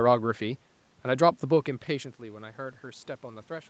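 From 1.87 s to 3.70 s there is automatic gain rising. After the talker moves back around 1.5 s, the input drops by about 15 dB, and the gain control slowly lifts its gain, so voice and room noise swell together. The waveform envelope widens steadily while the spectrogram's noise floor brightens.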